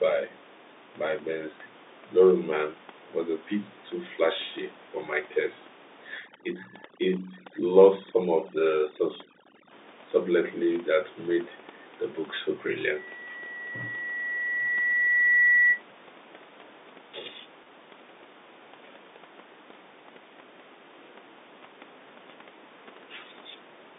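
From 6.18 to 9.71 s the speech goes through overdone noise removal. The suppressor is set far too aggressively, so any frequency band whose level sits close to its noise estimate is pulled down hard or switched off entirely. Low-level parts of the speech get caught along with the room noise. The gaps between phrases drop to near silence dotted with twinkling, chirpy specks.

Between 12.95 and 15.82 s a loudspeaker feedback squeal appears at 1.9 kHz. The microphone is hearing the loudspeaker it drives, and at that one frequency the round-trip gain is above unity. The tone feeds on itself, swelling over roughly three seconds from a faint whistle into a piercing squeal that ends up a few dB louder than the speech. It stops at 15.82 s.

At 17.64 s one 20 ms packet goes missing and is covered by packet loss concealment with pitch repetition. The receiver fills the gap by replaying the last pitch period it received. 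Because the loss is this short, the result is a brief held, slightly buzzy tone lasting about 20 ms rather than a fade to silence, and the speech then resumes. The room noise and the narrow telephone band can be heard beneath all of this.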